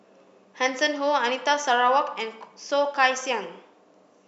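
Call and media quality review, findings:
No audible faults found in this speech recording.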